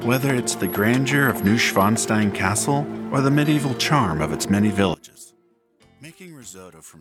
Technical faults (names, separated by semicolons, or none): one channel inverted